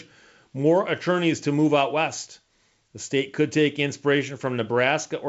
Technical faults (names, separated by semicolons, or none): none